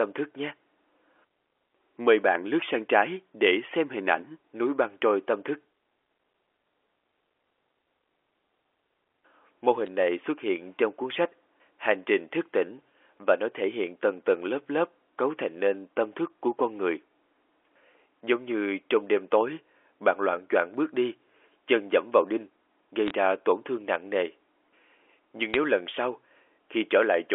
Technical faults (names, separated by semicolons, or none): bit errors on a digital phone line